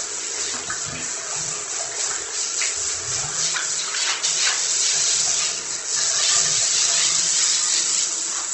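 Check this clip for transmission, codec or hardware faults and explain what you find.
One codec fault runs through the whole clip. Opus compression, likely at a low rate around 16 kbps in its music mode, makes the sound rough and grainy, with tonal parts turning noisy. Energy is kept per band, but starved bands get filled with folded or noise content. A spectrogram shows a hard ceiling at 8.1 kHz and smeared, speckled texture where clean harmonics should be.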